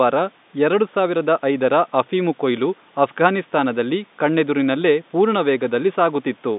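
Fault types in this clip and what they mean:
No faults are audible in this speech clip.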